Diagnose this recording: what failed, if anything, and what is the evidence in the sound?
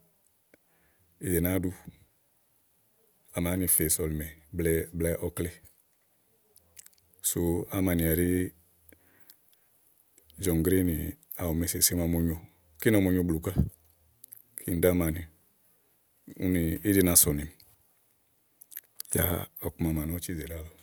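Nothing in this speech recording points to a failure at any stage of the chain. From the analogue side through to playback, no part of the sound carries the evidence of a fault.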